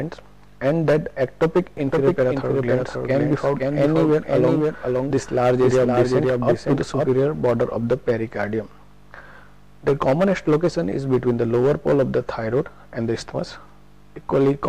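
A doubled audio track runs from 1.77 to 7.09 s: a second full-band copy trails about half a second behind, roughly 5 dB quieter, with no decay or room colour. It likely comes from a slower capture path, and it starts and stops abruptly.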